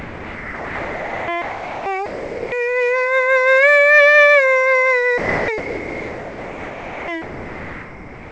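Music repeatedly gives way to steady noise or near silence at 0 to 1.28 s, 1.42 to 1.86 s, 2.06 to 2.52 s, 5.18 to 5.48 s, 5.58 to 7.08 s and 7.22 s to the end. This is likely sound dropped by the voice detector, which treated the music as background and substituted comfort noise. The music itself stops short of 8 kHz, as a wideband call path would leave it.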